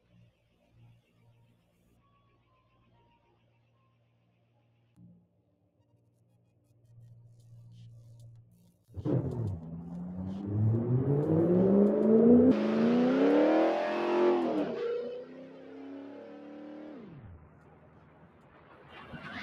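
A noise suppressor built for speech has been left running on this audio, treating sustained tones, ambience and decay as noise, so the level pumps and thins with a swing of roughly 20 dB. On a spectrogram, held partials and tails fade into patchy, flickering gaps while onsets stay bright. The sound cut by the noise suppressor comes at 1.61 to 1.77 s (about 4 dB down), then 3.36 to 4.97 s, 5.23 to 6.84 s, 15.25 to 17.17 s and 17.41 to 18.92 s, each dipping about 6 dB, where the waveform envelope sags after each attack.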